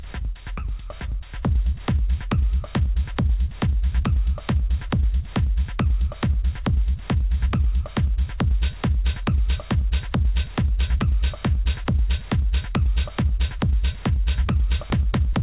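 Nothing here sounds wrong, just audio that has come through a call line with the usual phone-style narrowness, with nothing heard above about 4 kHz.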